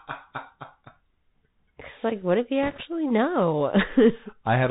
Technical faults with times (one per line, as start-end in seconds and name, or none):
0.00-4.70 Bluetooth CVSD headset codec
2.63-2.82 bit errors on a Bluetooth voice link